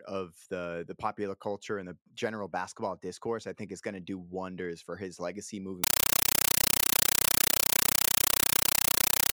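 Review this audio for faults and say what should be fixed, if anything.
Right after "wonders for his legacy", from 5.84 s to the end at 9.35 s, the speech gives way to loud, chattering static. That's a compressed stream played as audio: 8 ms noise bursts with silent padding, repeating at 31.25 Hz, which points to a 384 kbps AC-3 stream being treated as plain samples instead of decoded. To prevent it, make sure the output is set to decode Dolby Digital, or passes it only to a receiver that can, rather than sending the undecoded stream as PCM.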